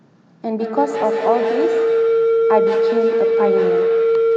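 From 0.57 s to the end, a feedback howl builds. Two devices sharing one room keep re-amplifying each other's output, so a tone near 500 Hz grows, with the loop repeating roughly every 150 ms, and peaks about 2 dB above the speech. This shows as a bright horizontal band and a swelling waveform.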